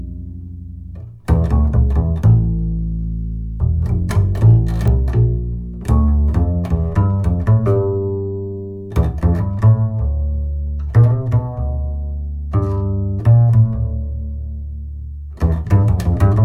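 At 4.88 s a single bit error spike cuts through as one sharp, broadband tick, peaking near about -10 dBFS. One flipped bit pushed a lone sample far off and straight back, so unlike a dropout click there is no gap and no disturbed waveform around it.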